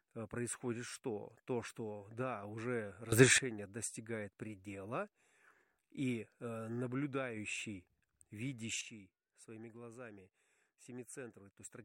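At 3.12 s, right after "что да уже", the speech and its background noise leap up together by about 15 dB until 3.38 s, just before "достигает предела". At 8.81 s both drop by about 10 dB and stay down to the end. Each is a sudden gain jump, likely a gain change applied instantly with no ramp.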